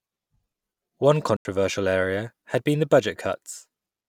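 At 1.37 s the speech drops into a block of digital silence lasting about 85 ms, ending at 1.45 s just before "area had been the". The output buffer likely went unfilled, which fits a 4096-sample block, so the sound is replaced by zeros. The waveform shows a flat line, and the spectrogram a blank vertical gap.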